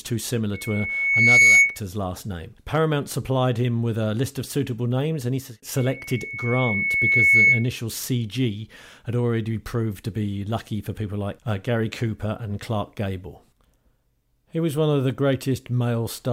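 Loudspeaker feedback squeal at 0.54–1.79 s, before "last name", and 5.77–7.69 s, after "suitable names and he": a loop gain above one makes a 2.2 kHz tone swell over a second or so to roughly 10 dB above the speech.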